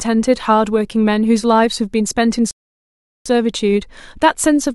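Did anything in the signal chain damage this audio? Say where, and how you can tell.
Yes, at the playback stage. There is a rebuffering stall from 2.51 s to 3.26 s. The speech stops dead and the gap is pure silence. When it comes back, it picks up exactly where it left off. Nothing is skipped or repeated. The player ran out of downloaded audio and waited for more data before carrying on. So no content is lost, but about 0.75 s of dead time is added to the timeline.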